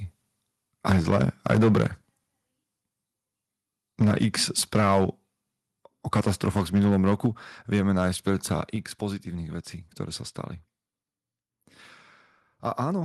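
From 0.86 to 1.87 s the loudest syllables crunch and crackle, likely microphone overload: the input runs about 7 dB past what the converter can take, so roughly a tenth of the samples get their tops flattened. At 0.92 s, right after that first harsh peak, there's a microphone volume step down, with voice and room noise both dropping about 3 dB at once, likely the call software pulling the input gain back because it heard clipping.

The same thing happens again. From 4.0 to 5.05 s the sound clips about 6 dB over the limit, with around 5% of samples cut off, and at 4.02 s the level drops another 3 dB. From 6.15 to 7.26 s a milder overload, about 4 dB over with around 4% clipped, gives the peaks a rougher edge, and at 7.26 s, as it ends, the level falls 3 dB again. At 8.76 s there's one last and bigger step, about 6 dB, with no clipping right before it. Each step is an instant drop rather than a fade.

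Throughout, the top end stops around 12 kHz, which fits the Opus call path it went through.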